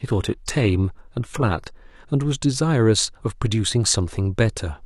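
From 0.0 to 2.0 s, speech is dull with synthetic treble. An adaptive stream starting at a low bitrate then steps up cleanly, with no gap.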